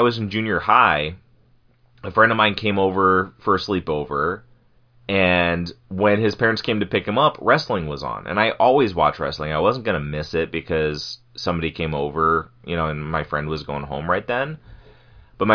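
Nothing stood out as a technical fault on listening to the recording.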